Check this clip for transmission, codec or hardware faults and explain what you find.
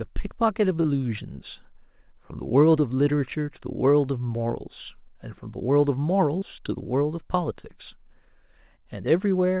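The clip shows three instances of short concealed packet loss, at 0.82, 3.30 and 6.39 s. Each lasts roughly 35 to 45 ms. About 20 ms of audio failed to arrive each time, which fits one lost 20 ms packet. The receiver extrapolated the preceding speech and blended back in, leaving a brief smear or wobble. All of this sits within a narrowband call path with nothing above 4 kHz.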